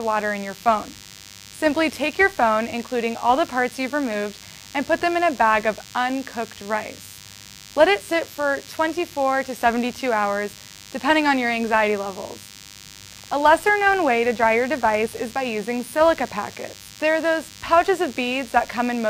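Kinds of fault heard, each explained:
DECT cordless phone buzz: A steady, thin, rasping buzz sits under the sound for the whole clip, pitched at 100 Hz but edgy rather than humming because it carries a dense stack of harmonics. It stays well down, somewhere around 20 dB below the main signal. The cause is a DECT handset or base station nearby firing a short radio burst every 10 ms; the audio circuitry rectifies those bursts into this pulse-train buzz.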